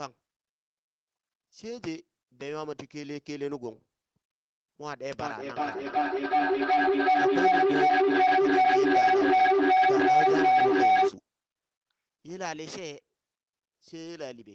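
From 5.2 to 11.19 s, feedback howl builds near 700 Hz as a microphone-loudspeaker loop gains level each pass, pulsing roughly every 0.4 s and peaking about 12 dB above the speech.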